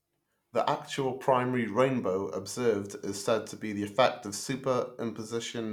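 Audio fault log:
No faults heard.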